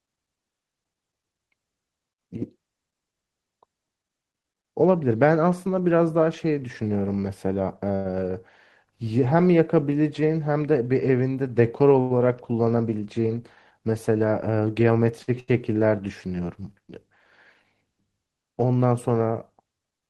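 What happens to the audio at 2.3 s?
Nothing goes wrong at 2.3 s; the speech there plays through intact, with no dropout, click, distortion or other fault at that moment.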